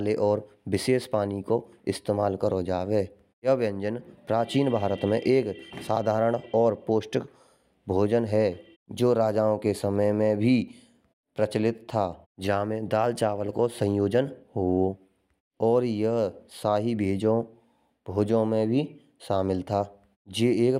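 A speech recording, with no technical fault to be heard anywhere in it. No moment calls for a time stamp or a cause.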